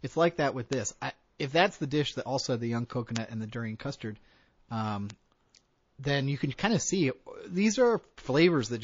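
Throughout the speech, the sound has a watery, swirling quality, with dulled treble and smeared consonant attacks. This fits MP3 compression at a low bitrate, likely around 32 kbps. When an encoder is starved of bits like this, it cuts the top of the spectrum at a fixed frequency and drops weaker frequency components, which flicker in and out from frame to frame. The result is a plainly audible, unsteady texture, with metallic chirps on s sounds.

At 0.73 s, between "it's like that with" and "I if", a bit error spike flips a stored sample value by a power of two, and the value snaps straight back. It is heard as a single sharp, broadband tick unrelated to the speech. The same kind of tick recurs at 3.16 s, between "also had the young" and "and the durian custard", and again at 5.10 s. Each one is brief enough to fit a corruption spanning only one sample or a few.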